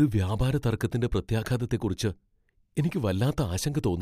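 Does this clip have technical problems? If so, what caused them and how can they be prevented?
No, there are no technical problems to hear in this speech clip. With nothing having gone wrong, there is no cause to trace and nothing to prevent.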